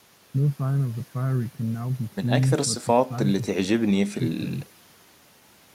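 Nothing stood out as a technical fault on listening to this speech recording.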